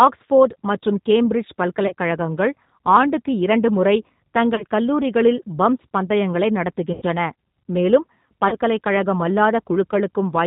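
The speech sounds slightly rough and synthetic for the whole clip, with plainly audible codec damage and nothing above 4 kHz. This is the G.729 codec (the G.729A variant) at 8 kbit/s. It rebuilds each 10 ms frame from a vocal tract filter, a pitch predictor and a few pulses rather than sending the waveform, and that sparse model is what you hear.

At 1.87 to 1.93 s, just after "ஆக்ஸ்போர்டு மற்றும் கேம்பிரிட்ஜ்", the sound briefly smears into a fading buzzy tone or coloured noise. This is VoIP packet loss concealed by the speech codec. About 30 ms of audio went missing, which fits a single lost packet, and the decoder filled the gap by repeating its last pitch and filter at falling gain. The same dip happens at 4.55 to 4.64 s, just before "கல்லூரிகளில் பம்ப்ஸ் பந்தயங்களை". It happens again at 8.49 to 8.56 s, each time after another 30 ms loss.

The longest gap, at 6.93 to 7.03 s, comes right after "கல்லூரிகளில் பம்ப்ஸ் பந்தயங்களை". 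Here about 90 ms was lost, which points to three consecutive packets. The stretched tone decays further, and the speech stays weak briefly as the decoder recovers.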